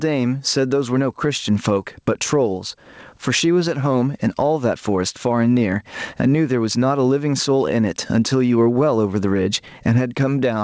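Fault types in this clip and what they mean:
Gain pumping: Loud and soft parts sit closer in level and the sound is squashed, with the gain swinging about 20 dB. Likely cause: excessive mic gain pulled down by a fast limiter.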